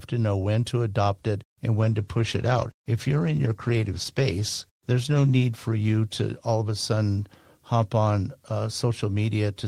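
From 1.81 s to 6.85 s the speech suffers a call bitrate drop. The call's bandwidth estimate fell, so the encoder had to spend far fewer bits on each moment of sound. The coding turns coarse and rough, with a watery smear. The high frequencies are cut away, leaving a muffled, dull tone. The worst stretch lasts about 3.7 s. The sound fits a fall from roughly 32 kbps to 15 kbps, and clarity returns as the rate recovers.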